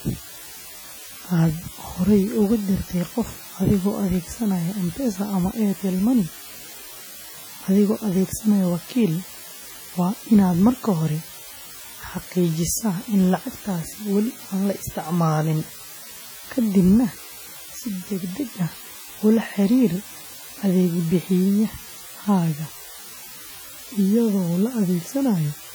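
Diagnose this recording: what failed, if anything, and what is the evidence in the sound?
A steady, even hiss sits under the speech for the whole clip, roughly 20 dB below the speech level, with no grittiness or distortion riding on the words. That points to low bit depth with dither at the sample-format conversion stage. The signal was reduced to very few bits, which fits about 6-bit samples, with dither added before rounding. The dither turns the quantisation error into constant white noise instead of signal-dependent distortion.

From start to finish the speech sounds washy and ringing, with a hiss that swells and fades with the signal. The damage is heavy, while content still reaches up to about 20.1 kHz, so the loss comes from coarse coding, not from a band limit. The likely cause is WMA compression at the codec stage, consistent with the first-generation WMA encoder at a low bitrate around 32 kbps. 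Its long transform blocks spread quantisation noise over tens of milliseconds, and weak spectral lines get zeroed.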